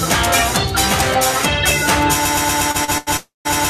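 At 2.25 s the playback chain most likely stalled and began resending the last fragment it held, producing a broken-record loop: a slice of about 0.12 s repeats exactly, back to back, from there to the very end of the clip. The audio that should have filled those final seconds never arrives, so the ear hears a stuttering, mechanical cycle in its place.

On top of that loop, three packets reached the receiver late and its jitter buffer briefly ran dry, giving a short stall from a late packet each time. The receiver stretched the last sound to cover the wait: 31 ms at 2.71 s, 34 ms at 2.84 s, and 88 ms from 2.98 to 3.09 s. Nothing is lost, but each spot holds too long with a faint buzz or dip, the last one noticeably longer.

From 3.17 to 3.47 s a longer hold-up in delivery likely emptied the jitter buffer again, a call audio freeze. The receiver extended the last sound for 283 ms as a fading buzz or hiss that drops to silence for about 160 ms before the packets catch up and playback resumes where it stopped. 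The result is an inserted gap rather than missing material, heard as a sudden hang and fade inside the repeating loop.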